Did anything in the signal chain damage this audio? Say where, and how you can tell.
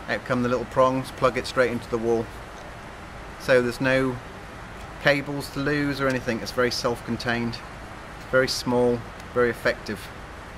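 Yes. There are two isolated sharp clicks, at 3.69 s and 5.84 s, each a single thin vertical line across the spectrum with no gap in the sound around it. They fit dropped samples, likely lost at the driver or buffer stage: a couple of samples, a tiny fraction of a millisecond, go missing, so the waveform steps abruptly from one value to a later one. That discontinuity is the click, and nothing audible is removed.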